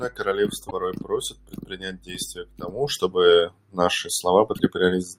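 Speech with damaged data in a compressed stream at 0.67–0.72 s and 4.56–4.60 s: corrupted frames make the decoder lose sync, giving brief glitches seen as abrupt waveform breaks.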